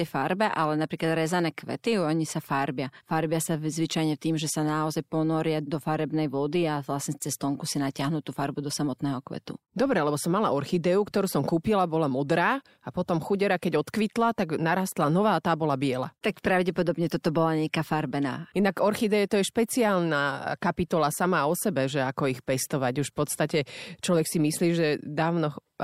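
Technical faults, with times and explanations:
No technical faults can be heard in this recording.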